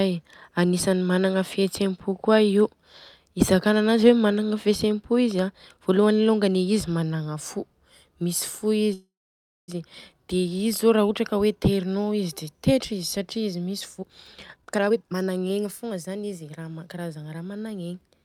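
A speech recording with a call audio freeze from 8.93 to 9.70 s: the sound trails off as a brief fading buzz into about 0.59 s of silence, then resumes where it stopped with nothing lost, the likely result of delayed packets draining the jitter buffer and adding roughly 0.75 s of delay. From 13.98 to 16.51 s a jitter buffer speed-up runs the speech at 129% with unchanged pitch, sounding hurried, as the receiver cuts short pitch-period slices, about 0.7 s in total, to shed the excess buffered audio.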